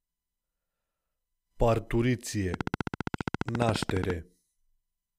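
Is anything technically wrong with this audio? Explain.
Yes, there's a train of clicks from 2.54 s to 4.11 s. It's a steady, regular ticking at about 14.7 clicks per second, roughly twenty in all, each much the same shape and peaking well above the underlying sound. It's likely something injecting a repeating pulse, such as interference from nearby equipment or a faulty connection or power supply. You hear it as a fast, even tick-tick sitting on top of the audio, plainly audible through that whole stretch.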